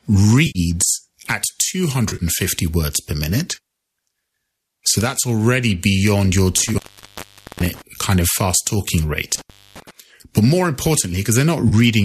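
AAC frame loss with concealment hits at 0.47–0.59 s, where about 80 ms of audio drops out and the decoder smears the last good spectrum into a brief noisy, phasey patch. The gap fits 10 ms frames, likely from the low-delay AAC stream. It recurs at 2.09–2.23 s, scattered over about 100 ms with the longest run around 40 ms.

Intermittent contact from 6.57 to 7.82 s opens the line for about 0.82 s. The sound cuts out with crackle at each edge as a loose connection breaks and remakes. A short concealed frame loss sits inside it at 6.73–6.76 s.

Intermittent contact returns at 9.35–9.91 s, open for about 0.26 s, with the same crackling edges.

A final frame loss of about 30 ms at 11.69–11.74 s leaves another brief smeared patch.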